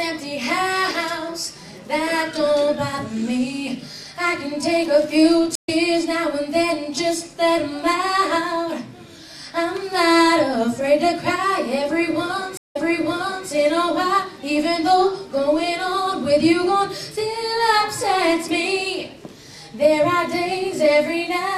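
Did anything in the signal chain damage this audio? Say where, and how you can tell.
Yes. Stream reconnects at 5.55 s and 12.57 s show that the network stage broke and the player restarted its decoder mid-stream. At 5.55 s there are about 123 ms of silence, and the sound resumes slightly later, skipping roughly 70 ms of material. At 12.57 s the gap is about 175 ms, and the audio picks up 0.73 s earlier, so a resent burst repeats material through about 13.48 s.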